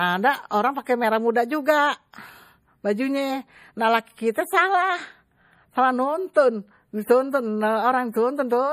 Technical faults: MP3 compression

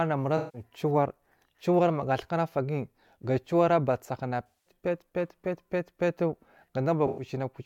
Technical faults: AAC frame loss with concealment

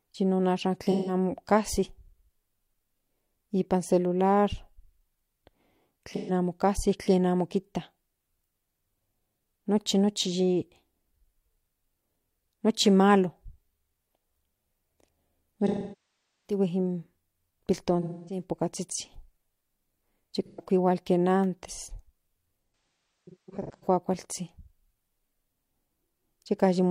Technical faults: AAC frame loss with concealment

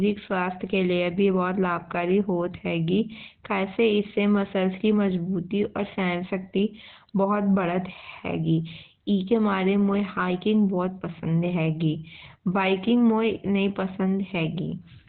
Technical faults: Opus compression

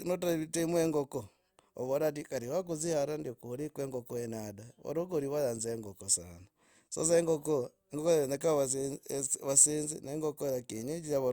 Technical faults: none

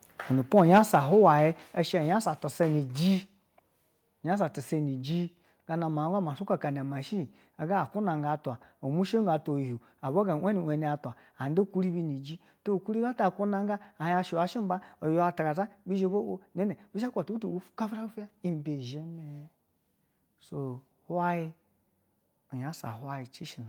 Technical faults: microphone volume stepped down

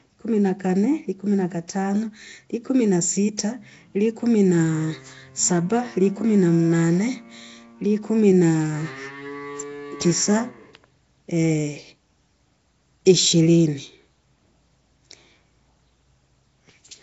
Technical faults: Nellymoser compression

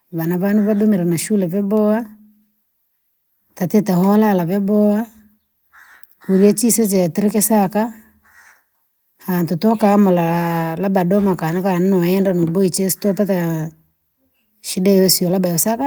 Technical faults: none

